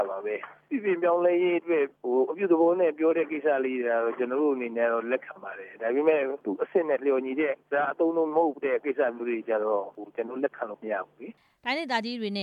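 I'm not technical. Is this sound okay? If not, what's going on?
Yes, this sound is okay, and there's nothing going on that needs fixing.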